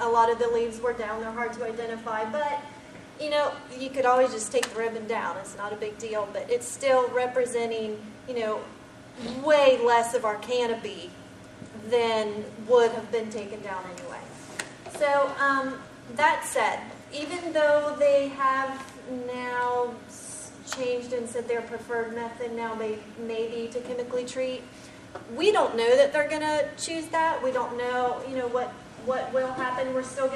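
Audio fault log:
Nothing stood out on listening to this audio.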